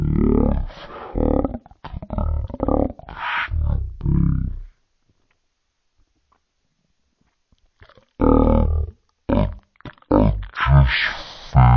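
From start to finish the speech plays at roughly a third of its proper speed, with pitch dropped by about 17.6 semitones, so it is slow, heavy and growling. This is a wrong sample rate: the speed ratio of 0.363 fits 44.1 kHz material played back unconverted at 16 kHz.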